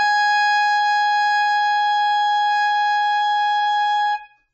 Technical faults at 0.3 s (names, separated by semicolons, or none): AAC compression